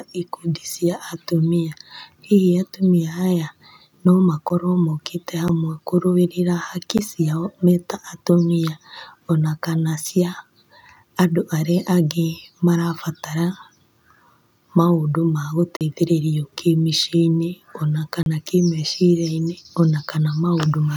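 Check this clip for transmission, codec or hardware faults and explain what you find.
Five blocks of digital silence appear in this speech clip. The program likely failed to fill its output buffer in time, so the audio dropped out abruptly. Ticks occur at 4.49, 5.48 and 6.98 s, each about 11 ms, fitting a 512-sample buffer. Short holes follow from 15.77 to 15.81 s (43 ms, fitting 2048 samples) and from 18.23 to 18.26 s (32 ms).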